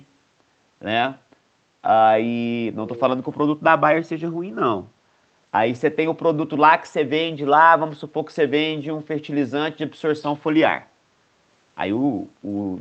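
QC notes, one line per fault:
2.86–3.01 s, echo leak: a short scrap of delayed speech, about 150 ms long, returns 486 ms after the original at roughly 20 dB below it, faint. The likely cause is a far end playing the call over a loudspeaker, where the echo canceller failed to fully subtract what its microphone picked up and sent that residue back. The scrap shares the call's top end, which stops near 8 kHz.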